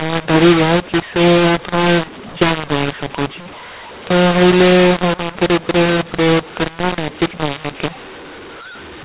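Harsh, gritty distortion runs through the whole of this speech recording: levels are scrambled and the pauses fill with hiss instead of silence. The cause is mu-law and A-law mixed up, with mu-law G.711 telephone samples decoded as A-law, so each logarithmic code maps to the wrong amplitude.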